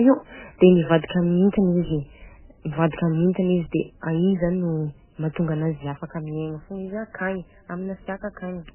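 Across the whole clip the speech sounds watery and swirly, with nothing above about 3.1 kHz, likely from heavy MP3 compression at a bitrate that fits roughly 8 kbps. A spectrogram shows a hard ceiling at 3.1 kHz and flickering holes where weak frequency lines switch off between frames.

From 2.91 to 2.93 s a short hiss runs ahead of a sharp attack, a pre-echo lasting about 23 ms. The codec spread quantisation noise across the whole block, into the quiet before the onset. The waveform shows a low noise smear preceding the attack, which sounds softened.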